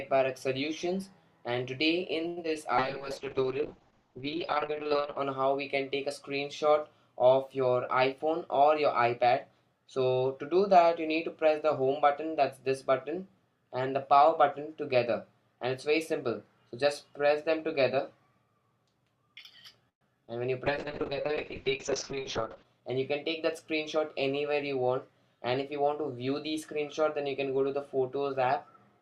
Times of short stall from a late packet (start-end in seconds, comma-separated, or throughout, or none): 2.27-2.39